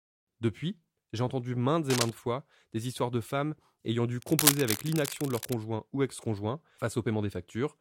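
From 1.90 to 2.10 s, between "j'ai entendu maintes" and "fois des histoires de", and again from 4.19 to 5.53 s after "de femmes ayant dû", cable scratch noise rustles at about speech level. It is likely a worn connector shifting. On a spectrogram it shows as ragged broadband smears, and on the waveform as spiky, uneven bursts.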